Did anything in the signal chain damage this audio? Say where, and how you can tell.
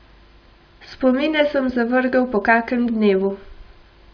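No. Nothing in the chain damaged it.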